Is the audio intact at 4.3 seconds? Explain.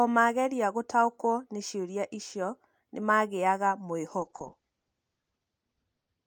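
No. From 4.21 s, just after "ciũria icio ni magĩaga", a call bitrate drop holds to the end of the clip at 6.27 s. The encoder falls from 64 to 8 kbps and the audio band narrows from 20 kHz to 8 kHz, so the speech turns muffled and rough, with a watery, coarsely coded texture. Unlike packet loss, the sound never breaks into gaps or glitches. It keeps going, just degraded.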